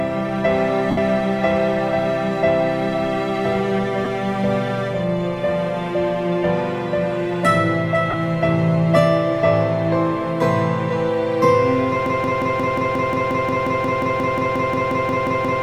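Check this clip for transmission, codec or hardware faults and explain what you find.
Two faults are present: dropouts from lost LE Audio frames, and a broken-record loop that runs to the end.

Lost LE Audio frames occur at 0.90–0.98 s (about 68 ms), 4.05 s (15 ms) and 8.10–8.14 s (30 ms). These gaps match runs of 7.5 ms frames. The LC3 decoder conceals each gap by replaying the last spectrum with randomized signs, so the sound briefly becomes a noisy smear.

A broken-record loop begins at 12.06 s and lasts until the end. A 178 ms fragment repeats back to back about 20 times, and the audio that belonged there never plays. The likely cause is a stalled player, encoder or stream resending its last buffered piece.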